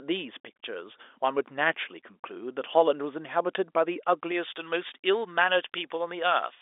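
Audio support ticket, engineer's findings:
Pre-emphasis left on, 4.31 s to end at 6.62 s. Speech turns thin, bright, sibilant. Treble boost applied upstream, matching de-emphasis missing. Tilt about 11 dB at 10 kHz re 1 kHz, fits J.17 curve. Heard as lift up to the 3.8 kHz G.711 band edge.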